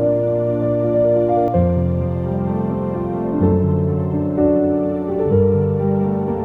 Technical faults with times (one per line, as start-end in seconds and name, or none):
0.00-1.48 doubled audio track